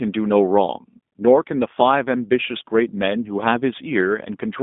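Speech, and it's been through the G.729 codec from start to finish. The band sits roughly between 200 Hz and 3.6 kHz, with nothing at all above 3.7 kHz, so it's classic narrowband telephone sound. The coding damage is plainly audible: a rough, slightly synthetic edge, because the codec rebuilds each short frame from a vocal tract model, a pitch guess and a handful of pulses. The character fits G.729A running at 8 kbit/s.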